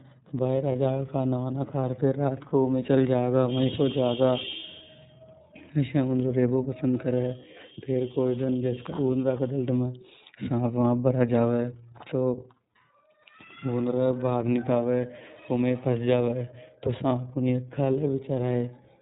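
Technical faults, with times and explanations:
Throughout: iLBC codec. The speech is band-limited to nothing above 4 kHz and sounds slightly rough and synthetic, with plainly audible coding damage. The 30 ms frame size and the sound point to the 13.33 kbps mode. Unlike broadband codec smearing, the dullness comes from the narrowband cut-off, and the graininess comes from excitation modelling.
0.72, 2.49 and 13.23 s: lost iLBC frames. Each time, one 30 ms frame is missing, and the decoder fills it by repeating the last pitch cycle blended with noise. This gives a brief held, buzzy vowel. Because each frame decodes independently, the speech recovers almost at once.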